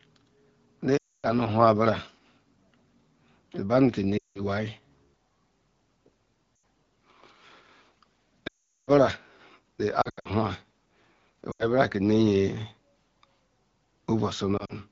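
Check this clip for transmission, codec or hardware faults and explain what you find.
Lost AMR speech frames occur at 0.97–1.28, 4.17–4.41, 6.55–6.63, 8.47–8.91, 10.01–10.28, 11.51–11.67 and 14.57–14.73 s. The decoder repeats the last good settings with falling gain. Speech drops to near silence within two frames, and returns rough. The light wideband coding fits the AMR-WB 12.65 kbit/s mode.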